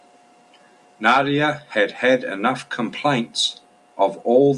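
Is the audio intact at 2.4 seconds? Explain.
Yes, the speech at 2.4 seconds is intact, with no audible fault at that moment.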